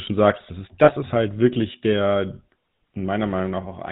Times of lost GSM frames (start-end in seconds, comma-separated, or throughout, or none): 0.84-0.92